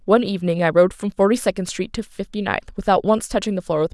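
No technical faults are audible.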